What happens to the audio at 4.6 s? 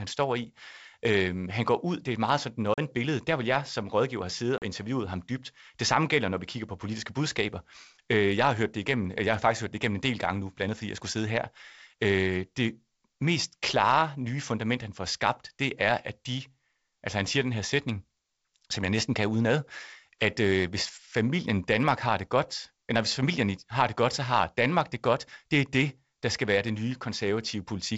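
A hard-edged gap of silence cuts the speech from 4.58 to 4.63 s, right after "som rådgiver have siddet" and before "interviewet ham dybt", and the sound comes back slightly distorted. This is packet loss on an ADPCM call: about 40 ms, roughly two packets, went missing and was filled with silence, leaving the decoder's adaptive predictor and step size out of step with the sender's until they resynchronise.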